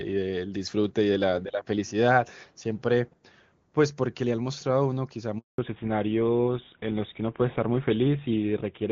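A handover gap cuts into this speech recording at 5.38 s and lasts 200 ms, until 5.58 s. The voice collapses to silence within a few tens of milliseconds. This is what happens when a phone call is passed from one network to another and no speech frames reach the receiver while the link is being re-established, so whatever was said in that fifth of a second never arrives. A fallback to narrowband follows straight after, from 5.58 s to the end of the clip. The upper band disappears and nothing remains above 4 kHz, so the voice turns duller and coarser than before the break. Up to that point the call carries the clean, wideband character of HD Voice, consistent with AMR wideband at its top rate of around 23.85 kbit/s. After the switch the sound points to an older narrowband codec such as GSM full rate at 13 kbit/s, which the new network leg negotiated in place of the wideband link.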